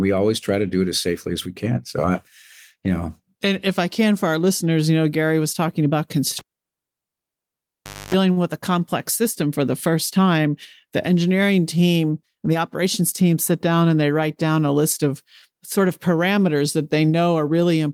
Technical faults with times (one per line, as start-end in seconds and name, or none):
6.39-8.14 cable pulled and plugged in
8.31-8.39 short stall from a late packet
12.23-13.22 jitter buffer speed-up